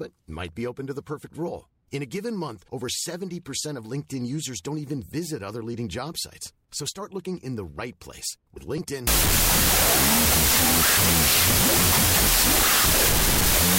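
Wrong sample width sets in at 9.07 s, just before "your free job on", and runs to the end of the clip. From that point each stored sample is being read with the wrong number of bytes, so many values are built from mismatched bytes. The speech is buried under loud, harsh noise and plays at half speed, an octave low, which fits 32-bit float data being read as 16-bit integers.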